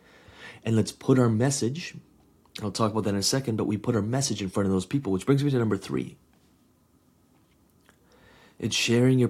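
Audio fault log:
No faults heard anywhere in the speech recording.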